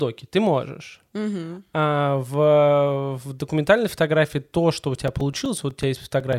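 From 4.83 to 6.33 s, regular ticks every 0.125 s: periodic USB or driver dropouts, a blocked bus silencing a few milliseconds each time.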